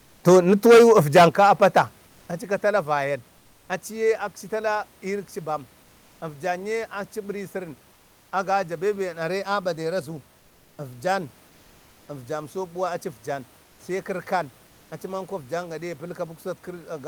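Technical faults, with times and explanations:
0.28–1.81 s, microphone overload: the input was likely driven about 12 dB past the converter's limit, flattening the tops of the loudest peaks into harsh, crackly distortion.
0.29 s, 1.29 s and 2.31 s, microphone volume stepped down: the input gain was likely cut by software in abrupt steps of about 2, 7 and 7 dB, so level drops suddenly.
7.93–8.31 s and 13.63–13.79 s, comfort noise in place of the background: transmission likely paused during silence, as with Opus DTX, and synthetic noise replaced the background for 380 ms and 160 ms. It is steady and featureless, about 2 and 3 dB quieter, and the second ends just before "sai kərkan acimanko afjan".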